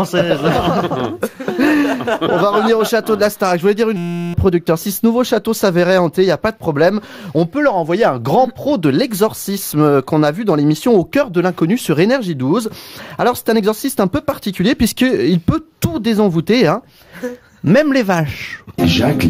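A system hang loop runs from 3.97 to 4.34 s. The machine or its audio driver stalled while the sound hardware kept replaying the same tiny ring buffer, so one 5.8 ms slice of audio repeats exactly about 64 times. A loop that short doesn't stutter. It fuses into a steady 172 Hz buzz, which fits a 256-sample buffer. Because the loop replaces the real signal, roughly 0.4 s of the original sound is lost.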